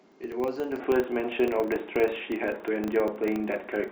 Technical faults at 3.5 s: filter restarted on every block; input switched to a poorer device

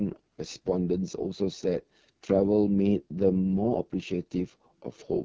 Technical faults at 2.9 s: AMR wideband (HD Voice) codec

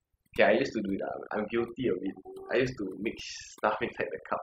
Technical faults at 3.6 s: overdone noise removal

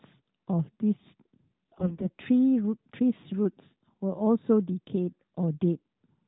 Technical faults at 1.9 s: AMR bit errors

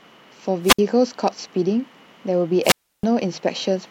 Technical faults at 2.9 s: wireless microphone squelch dropout

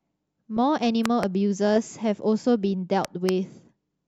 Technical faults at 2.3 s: none

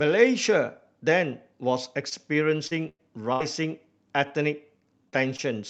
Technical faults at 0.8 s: none

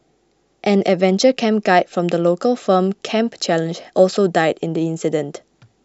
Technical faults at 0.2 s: none

